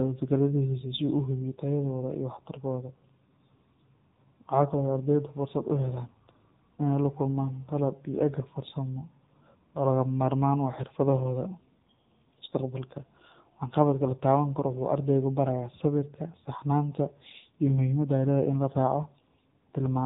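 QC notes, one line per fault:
Throughout: AMR narrowband mobile codec. The speech went through a heavily compressed AMR-NB path. The heavy damage points to one of the lower modes, consistent with about 6.7 kbps. The codec rebuilds each 20 ms frame from a vocal-tract filter driven by a handful of pulses, so with so few bits the speech comes out buzzy and synthetic. Its 8 kHz sampling leaves nothing above 3.8 kHz, which makes the sound dull and telephone-like.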